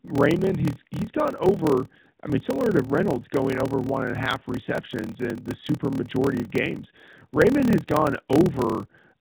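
A block size mismatch (padded) runs through the entire speech clip, from start to finish. One stage hands over shorter blocks than the next expects, and zeros fill the remainder, so a brief silence lands in every block. That produces a steady buzz at about 38.3 Hz and stretches the speech to 0.889 of normal speed, which fits 1024-sample blocks read as roughly 1152. The narrowband mobile codec path is audible as a band limit at 4 kHz with light coding colouration.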